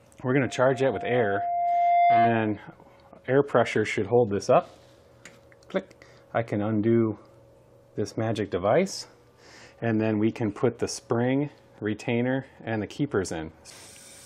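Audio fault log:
0.45–2.59 s, loudspeaker feedback squeal: a single pure tone near 697 Hz swells over roughly a second and a half into a squeal sitting around 5 dB above the sound, because the microphone re-captures its own loudspeaker and the loop gain exceeds unity at that frequency.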